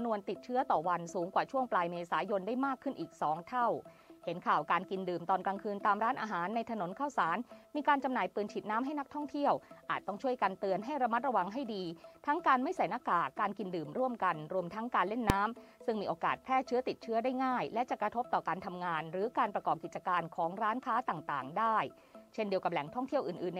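At 15.30 s, a calculation broke down and produced infinite or invalid numbers, which were clamped to the largest possible value. This is invalid numbers at full scale. The output sat flat at one extreme value, far beyond the audio's peaks, for about 1.45 ms, a block that fits 64 samples, and so short that it is heard as a single loud bang.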